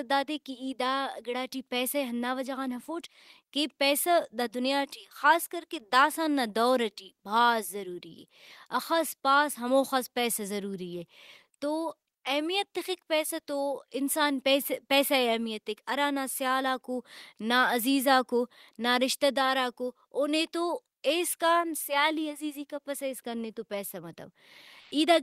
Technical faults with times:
24.80-24.91 comfort noise in place of the background

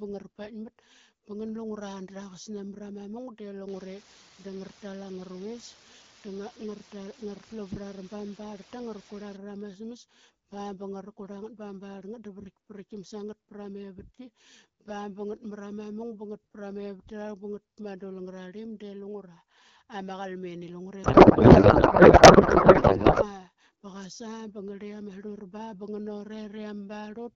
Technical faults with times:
3.70-9.36 low bit depth with dither
21.03-23.32 codec payload misread

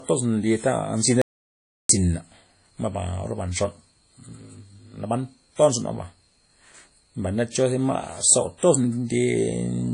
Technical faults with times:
0.00-9.94 WMA compression
1.22-1.89 audio dropout to silence

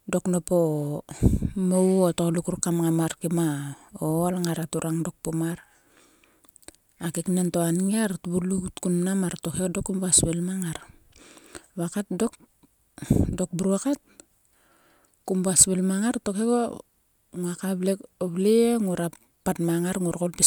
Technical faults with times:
none

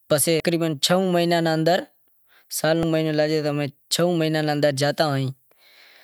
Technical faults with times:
0.40-0.42 damaged data in a compressed stream
2.83 damaged data in a compressed stream

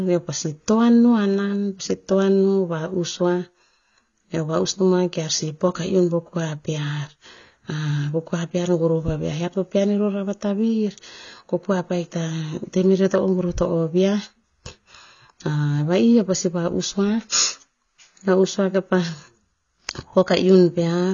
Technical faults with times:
0.00-21.13 AAC compression

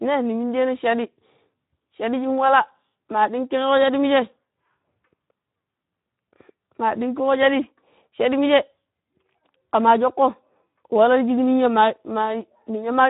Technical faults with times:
0.00-13.10 Speex codec

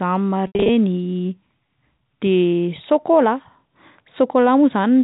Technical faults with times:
0.47-0.69 packet loss with pitch repetition

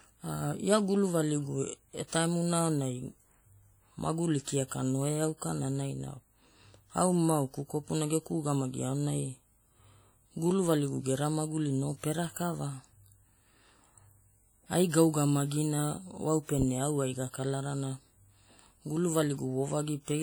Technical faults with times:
0.00-20.23 WMA compression

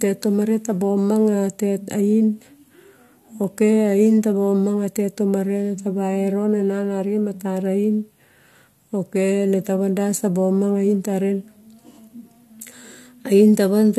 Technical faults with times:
none

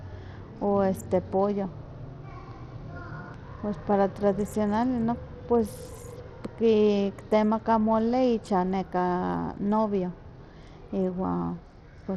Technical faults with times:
0.00-12.16 Bluetooth SBC compression

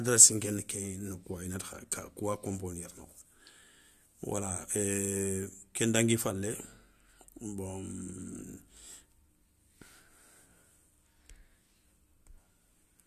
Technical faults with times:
7.36 compressed frames skipped

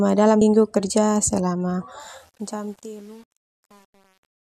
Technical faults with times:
0.40 damaged data in a compressed stream
2.00-4.50 truncation distortion on a fade

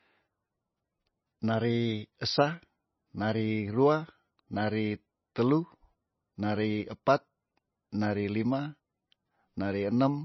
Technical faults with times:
0.00-10.24 MP3 compression

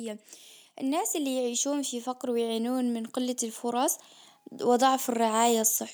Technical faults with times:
0.77-4.01 automatic gain rising

